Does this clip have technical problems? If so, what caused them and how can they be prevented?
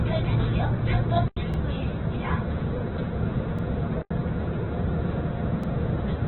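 Yes. The whole clip sounds rough, grainy and muffled, with nothing above about 4.1 kHz. This is likely Opus compression in its music mode at a narrowband setting, which fits a very low bitrate near 8 kbps: too few bits to code each band cleanly, so the bands are filled with noise. Encoding at a higher bitrate would prevent this.

Two short holes occur from 1.28 to 1.37 s and from 4.02 to 4.11 s. These are blocks of digital silence, each about 85 ms long, which fits a 4096-sample output buffer that was not filled in time. Giving the audio thread more headroom or using larger buffers would prevent these dropouts.

A brief stutter is heard at 1.54 s, 3.59 s and 5.64 s, where about 48 ms of sound plays twice. These are overlapping chunks: the audio was handled in 2-second pieces, and each new piece started slightly before the previous one ended. Aligning chunk boundaries exactly, or crossfading and trimming the overlap, would prevent this.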